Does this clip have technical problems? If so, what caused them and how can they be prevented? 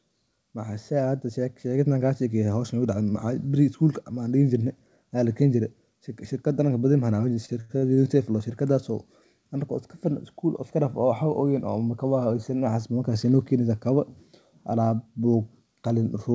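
Yes. From 0.39 to 2.82 s, an automatic gain rise occurs: the gain control judged the incoming level too quiet and raised its gain gradually, by about 5 dB. Because the adjustment applies to the whole signal, the speech and the background noise swell together over those two and a half seconds rather than the voice alone getting louder. Setting a sensible input level at the microphone, or fixing the gain before the call, prevents this slow ramp.

Between 7.34 and 8.15 s there are repeated stalls, a stutter. Packets arrived late or too slowly, so the jitter buffer ran dry several times in quick succession. Each time, the receiver stretched the last bit of sound to fill the wait, the longest about 88 ms, until data resumed. Nothing is lost, but roughly a third of that stretch is filler, so the speech drags and hiccups there. A more stable network connection, or a deeper jitter buffer, prevents these underruns. 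The call codec's band limit, with nothing above 8 kHz, fits G.722.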